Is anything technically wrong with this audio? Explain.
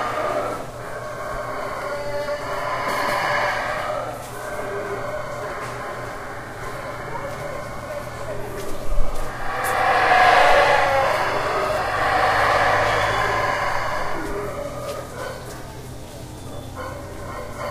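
Yes. At about 1.82 s there is a repeated buffer: new audio did not reach the output in time, so the device played its last block again, twice more. Each block is only about 1.45 ms long, which fits a 64-sample buffer, so the three identical copies fuse into a tiny click or buzz rather than an audible stutter. A few milliseconds of real sound are displaced. Unlike a dropout, the gap is filled with repeated material, not silence.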